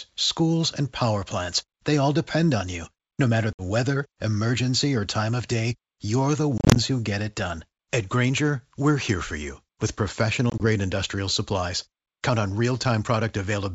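Packet loss on an ADPCM call leaves hard-edged silent gaps at 3.53–3.62 s (before "weather emergency or time"), 6.58–6.78 s (before "who get it done") and 10.50–10.63 s (before "industrial supplies"). Unlike plain dropouts, the resumed speech returns slightly distorted while the decoder's predictor and step size fall back into step with the sender's.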